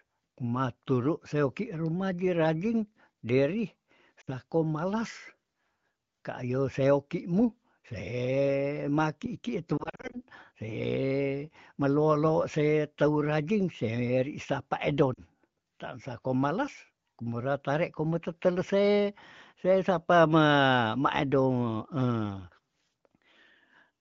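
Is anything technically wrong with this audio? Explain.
Yes. Lost AMR speech frames: radio errors corrupted frames, and the wideband decoder bridged each gap by reusing its last good pitch and vocal tract settings at falling gain. At 4.21 to 4.29 s a 60 ms gap makes a short warbling dip. From 9.78 to 10.23 s several short losses, none longer than 40 ms, leave a string of brief dips and warbles. At 15.13 to 15.20 s a 40 ms dip comes just before "tan sako". The wideband coding around these gaps is light, and speech stays clear.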